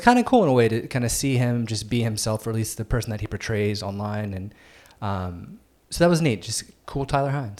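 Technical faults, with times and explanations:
Nothing stood out on listening to this speech recording.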